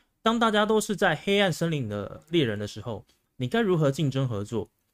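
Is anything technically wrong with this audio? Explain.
Yes. At 3.73 s there is a single sharp click from dropped samples. A handful of samples, roughly a tenth of a millisecond, likely went missing from the stream. The waveform jumps straight to a later value. No sound is lost, but the step is heard as a brief click.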